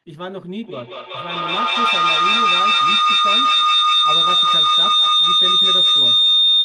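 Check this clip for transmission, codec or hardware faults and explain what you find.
There is one fault: feedback howl. From 0.67 s to the end, a tone near 4 kHz builds and pulses about five times a second. Two devices share a room and call. Each loop trip adds gain. The howl peaks about 14 dB above the speech.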